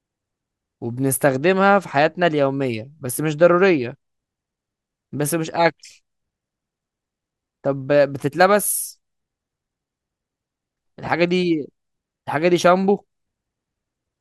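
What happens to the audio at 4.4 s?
Nothing goes wrong at 4.4 s; the speech continues intact through that moment with no dropout, click or distortion.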